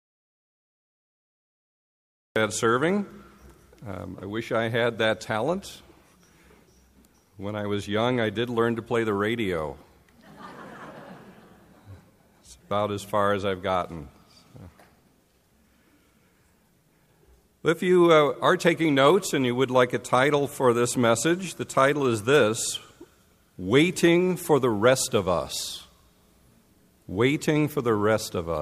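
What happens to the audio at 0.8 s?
At 0.8 s the audio is in an audio dropout to silence that is already under way when the clip begins and lasts until about 2.36 s. The signal there is silent, most likely because the input was lost while recording carried on. What sets it apart from a quiet passage or a noise gate closing is that no room tone or hiss survives at all. The sound simply starts abruptly when the gap ends.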